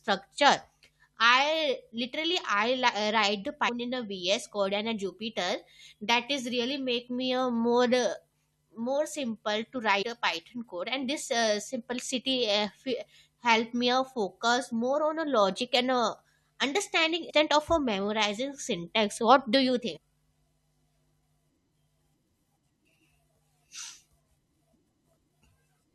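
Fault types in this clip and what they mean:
Damaged data in a compressed stream: corrupted bytes make the decoder misread frames and resync, giving five short glitches at 3.68, 10.01–10.03, 17.29–17.31, 19.96 and 25.16 s, each a thin broadband vertical streak on a spectrogram and an abrupt waveform glitch.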